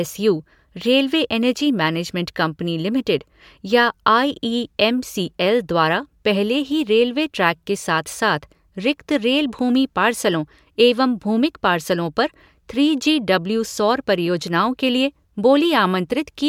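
No technical faults can be heard in this recording.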